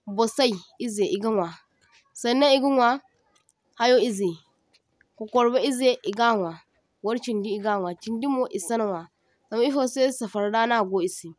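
No faults detected in the speech recording.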